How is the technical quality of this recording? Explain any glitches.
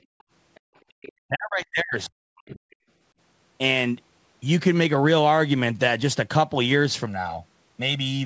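The quality is uneven. Several echo-canceller glitches cluster in the first three seconds, and a comb-filtered stretch closes the clip. The call microphone processing caps the band at 8 kHz, with nothing above that.

Background gated by the echo canceller, at 0.03–0.27 s, 0.60–0.74 s and 0.92–0.98 s. The canceller clamped the microphone while its loudspeaker was active, pulling the room tone down by about 37 dB, and about 36 dB in the last instance. You hear the ambience abruptly vanish and snap back. What separates this from double-talk suppression is that the background floor drops out, not the talker's voice, and each hole lasts well under a quarter second.

Other side's voice leaking through, at 0.19–0.23 s, 0.55–0.60 s, 1.02–1.12 s and 2.71–2.76 s. These are faint, brief fragments of a second voice. The likely cause is loudspeaker output that the canceller failed to subtract from the microphone. 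Levels sit about 40 dB, 35 dB, 25 dB and 35 dB below the main speech, so the 1.02 s scrap is the most noticeable. Unlike gating, this adds sound rather than removing it.

Speech suppressed in double talk, from 1.28 to 2.59 s. The talker's own voice sinks by around 40 dB in pieces, about a second in total. Both ends were likely speaking at once, and the canceller, unable to separate near speech from echo, attenuated everything. Here the voice itself ducks in chunks, unlike the brief room-tone holes.

Channel delay (comb filtering), from 7.06 s to the end. One channel runs roughly 1.5 ms behind the other, and summing them to mono cancels shared content at evenly spaced frequencies, starting near 300 Hz. The result is a steady hollow, phasey colour. It stays fixed rather than pumping or dropping out, which distinguishes it from the canceller faults.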